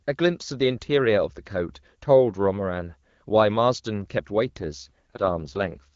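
At 4.6 s the speech shifts into an AMR rate drop that lasts until about 5.86 s. The bandwidth stays the same and nothing cuts out, but the sound turns rough, raspy and more synthetic, which fits the AMR-WB codec stepping down from the clear 12.65 kbit/s mode heard earlier to its 6.6 kbit/s mode. That's what happens when a weak radio link makes the network move bits away from the speech and into error protection.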